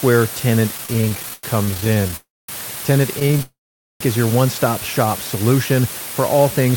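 The speech was quantised to only 4 bits, with dither added before rounding, so the rounding error became steady white noise roughly 10 dB below the signal. Throughout the clip this is heard as a constant, even hiss rather than distortion.

From 0.77 to 2.13 s, packets kept arriving late, so the jitter buffer ran dry 28 times. This produced repeated stalls (stutter). The receiver stretched the last sound to fill about 431 ms, roughly a third of that stretch, with the longest gap 97 ms. The speech drags and stutters, but nothing is lost.

From 2.16 to 2.49 s a call audio freeze follows, likely caused by packets being held up in transit. The last sound is held and fades, leaving about 220 ms of silence within a 321 ms gap, and the speech then resumes where it stopped.

From 3.19 to 3.41 s, six brief stalls, none longer than 14 ms, add about 69 ms of stutter. Then from 3.42 to 4.01 s a longer freeze inserts 580 ms, of which about 470 ms is silence, before the audio resumes without losing anything.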